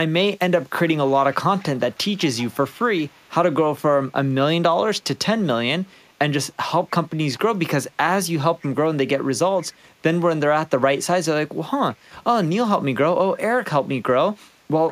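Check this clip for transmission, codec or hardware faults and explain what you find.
One fault appears: echo leak. A faint copy of the speech returns about 152 ms late, roughly 20 to 40 dB down, at 1.07–1.11, 1.31–1.35, 1.58–2.18, 2.37–2.84, 3.04–3.3, 5.86–5.9, 8.6–8.67 and 9.58–9.75 s. The likely cause is a far-end loudspeaker whose echo canceller let some of its own microphone pickup through.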